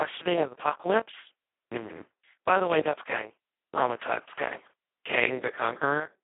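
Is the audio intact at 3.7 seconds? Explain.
No. At 3.7 s, as throughout the clip, the speech carries Speex codec damage. Too few bits for the excitation, which fits a bitrate near 2 kbps, leave it hoarse and robotic, band-limited to about 300 Hz to 3.4 kHz, with nothing above 3.8 kHz.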